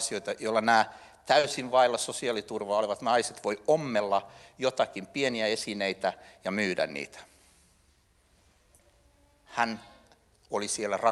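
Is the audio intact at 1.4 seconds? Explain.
No. Between 1.39 and 1.50 s there is short concealed packet loss: about 40 ms of audio never arrived and was filled by extending the preceding sound, then blended back in. Unlike a dropout, there is no silent gap, only a brief smear or wobble.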